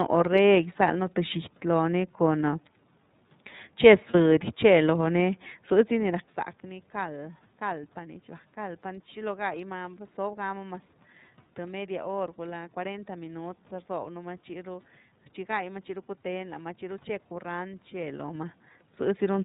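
The speech runs through the iLBC codec from start to finish. It is a narrowband coder, so nothing above 4 kHz survives. The damage is plainly audible: a rough, slightly synthetic edge on the voice. The sound fits the 13.33 kbps mode with 30 ms frames.

From 4.11 to 4.15 s, one iLBC frame is lost. The decoder fills the 30 ms gap by repeating the last pitch cycle mixed with noise. It sounds like a brief, buzzy held vowel. Each frame decodes independently, so the voice recovers at once.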